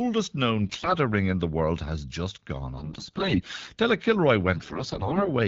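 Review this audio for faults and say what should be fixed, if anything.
Three stretches of the speech turn hoarse, scratchy and gargly while pitch and loudness stay roughly steady: 0.64 to 0.95 s, just before "ring in the world"; 2.78 to 3.78 s, right after "world has just gone"; and 4.54 to 5.29 s. These are AMR bit errors. A poor radio link flipped a heavy share of the weakly protected bits in each frame, but the checksum on the key bits still passed, so the decoder used misplaced excitation pulses and wrong fine gain and spectral values. Around them, the AMR wideband (HD Voice) codec sounds clear, which points to a rate near 12.65 kbit/s. To prevent this, improve the link quality or use stronger channel coding, and conceal frames that show bad bits instead of decoding them.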